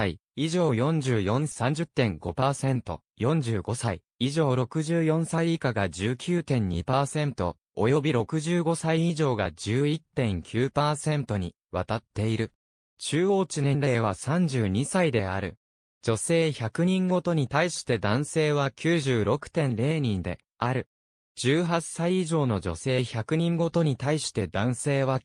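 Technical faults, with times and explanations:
1.51 s, skip ahead. Playback jumps forward with no gap filled. About 0.7 s of sound is missing, and the two sides are joined almost directly. Audio already waiting was dropped in transit or when the jitter buffer overflowed, so the delay fell by that much.
1.63 to 3.85 s, jitter buffer speed-up. The sound runs at about 109 percent speed but keeps its pitch, so it feels hurried. The buffer held more audio than its target. Short pitch-period pieces, about a fifth of a second in total, were cut out repeatedly to reduce the delay.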